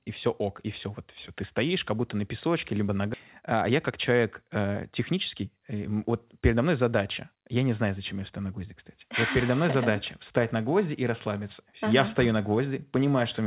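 Speech heard through a narrowband call path, with nothing above 4 kHz, consistent with G.711 mu-law at 64 kbps, contains two faults. At 3.14 s, right after "на песочке либо на", a skip ahead occurs: around a second and a half of speech is gone and the two sides are butted together with no silence or fill, unlike a dropout, which would leave a gap. From 3.42 to 6.77 s a jitter buffer speed-up follows, as the buffer sheds the backlog by trimming pitch-period slices and removes about 0.4 s in total. Speech runs at 110 % speed yet keeps its normal pitch, which separates it from a playback-rate or pitch-shift error.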